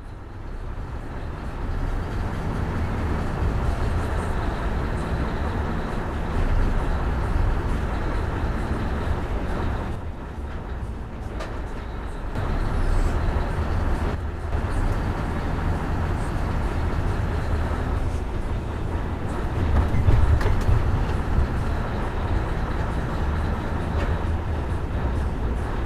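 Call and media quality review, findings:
Abrupt level drop of about 6 dB at 9.95–12.35 s and 14.15–14.52 s. One channel drops out, likely a lost stereo leg before the mono sum.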